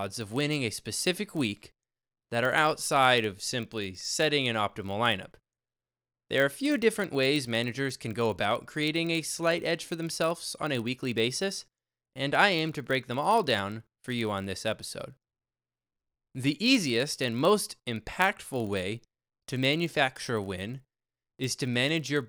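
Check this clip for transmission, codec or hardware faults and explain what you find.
One fault runs through the whole speech clip: a block size mismatch (padded). A short run of zeros lands in every block, so a steady 46.9 Hz buzz sits under the audio, which fits 1024-sample reads at 48 kHz. Pitch is unchanged and the speed factor is only 0.999, so there's no audible slowdown. Random dropouts would leave irregular gaps, but this buzz keeps an exact, steady rate.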